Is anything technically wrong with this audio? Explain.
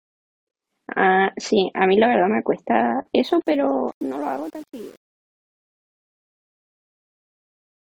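Yes. From 3.16 s to the end, the speech fade-out turns gritty, worst from 3.57 s onward. This is truncation distortion on a fade. The fade stage keeps too few bits, which fits an 8-bit path, and adds no dither, so the quiet tail collapses into coarse square steps.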